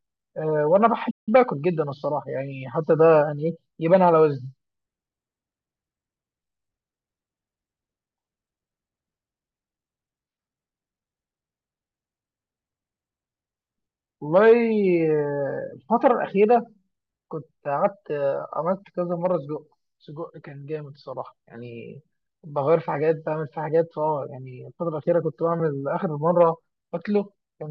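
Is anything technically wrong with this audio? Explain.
Yes, there is a playback stall in this speech clip. From 1.10 to 1.29 s the output drops out for about 165 ms: the sound stops abruptly mid-flow, holds silent, then resumes. The likely cause is the player running short of buffered data or its audio thread being blocked, so nothing reached the output until it recovered. On a waveform this appears as a flat gap cutting across active signal, and on a spectrogram as a clean vertical blank band.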